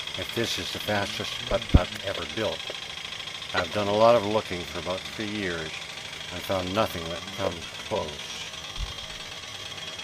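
At 3.57 to 3.60 s a brief chirp-like blip of misplaced energy cuts through the sound, too short and oddly pitched to belong to the material. This is a corrupt frame decoded: a few consecutive compressed frames arrived with damaged bits, and the decoder rebuilt them anyway. Misread gain values and spectral codes scattered energy into the wrong frequency bands, so for those few tens of milliseconds the output is garbage.

From 7.04 s to the end, the pace abruptly drops to roughly 69 percent of normal speed while the pitch stays where it was, and the sound drags. This is a time-stretched section, likely from software lengthening the final stretch to fill a fixed duration. To slow it without lowering the pitch, it repeats short overlapping slices of the waveform.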